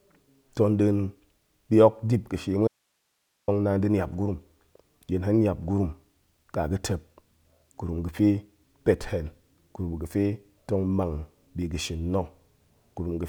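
Speech, with an audio dropout to a faint residue from 2.68 to 3.48 s: the signal cuts abruptly, leaving only hiss far below normal level rather than a natural pause or fade, likely a brief upstream signal loss.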